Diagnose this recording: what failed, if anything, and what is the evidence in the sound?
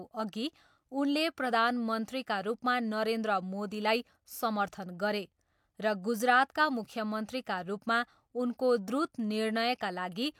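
Listening closely to the speech in this recording, nothing stood out as a failure at any stage.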